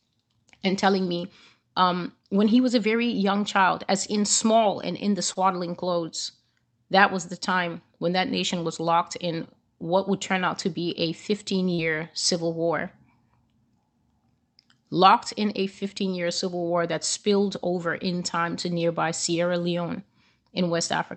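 Speech with short concealed packet loss in two places, at 5.33 to 5.45 s and at 11.74 to 11.80 s. About 20 ms and then 40 ms of audio never arrived in time. The receiver bridged each gap by extending the preceding sound, leaving a brief smear or wobble.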